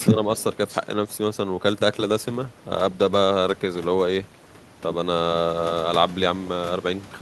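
Speech suppressed in double talk appears right at the start of this speech recording, from 0.1 to 0.2 s. For about a tenth of a second the voice dips by roughly 10 dB. The likely cause is an echo canceller that heard both ends talking together, could not tell the near talker apart from loudspeaker echo, and attenuated everything. A call bitrate drop follows from 2.09 to 4.93 s. The speech turns coarser and less clean, which fits the encoder being pushed from around 64 kbps down to 24 kbps after the bandwidth estimate fell. It sits at that reduced rate for about 2.78 s before recovering, and the detail lost in that stretch comes from the encoder spending far fewer bits on each slice of sound.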